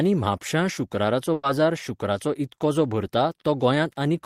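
At 1.33 s a burst of packet loss hits the speech: several consecutive packets never arrived in time, so the receiver had nothing to play until about 1.45 s. It filled roughly 100 ms by repeating the last sound it had and letting it fade, leaving no silent hole. When real audio returns, about 100 ms of the original speech has been skipped, so the talker seems to lurch forward past a smeared, dying fragment.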